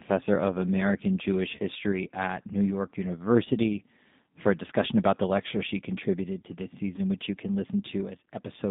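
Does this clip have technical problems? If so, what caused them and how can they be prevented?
Yes. Throughout, the speech sounds narrow, slightly rough and synthetic, confined to roughly 150 Hz to 3.7 kHz with nothing above. This is the G.729 codec at 8 kbit/s, which rebuilds speech from a vocal tract filter, a pitch predictor and sparse pulses rather than sending the waveform. Using a wideband codec such as G.722 or Opus would prevent it.

At 1.57 to 1.60 s, and at 6.96 to 7.01 s between "she contributed to this" and "which you can", the sound briefly smears into a buzzy tone or coloured noise that fades. This is VoIP packet loss concealed by the speech codec. About 20 ms of audio was missing each time, which fits two lost 10 ms frames, and the decoder filled the gap by extending its last pitch and filter at falling gain. A more reliable network path, with jitter buffering or forward error correction, would prevent it.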